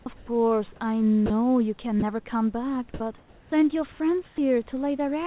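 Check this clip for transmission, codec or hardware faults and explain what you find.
Two kinds of fault are audible, both tied to discontinuous transmission on a narrowband call path. Nothing above 4 kHz comes through, which fits G.711 A-law at 64 kbps.

Sound dropped by the voice detector, at 0.02–0.06 s, 1.26–1.30 s and 2.00–2.02 s: brief pieces of speech are cut out and replaced by a steady hiss, about 20 to 40 ms each. The likely cause is the sender's voice detector judging quiet speech energy to be background and halting transmission. The receiver then fills the gap with synthetic noise until the detector triggers again, so the speech is clipped rather than faded.

Comfort noise in place of the background, at 0.16–0.28 s, 3.18–3.52 s, 3.92–4.00 s and 4.26–4.38 s: during pauses, the real room background is swapped for smooth, featureless noise. It drops in level by about 8 dB in the first stretch, about 3 dB in the third and about 7 dB in the fourth, and holds level in the 340 ms stretch at 3.18 s. 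This is likely comfort noise generation: the sender stops sending in silence and the receiver synthesises a rough spectral match, so the texture changes audibly.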